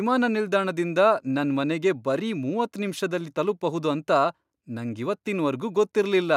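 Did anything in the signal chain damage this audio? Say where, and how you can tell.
No, nothing in the signal chain damaged this audio.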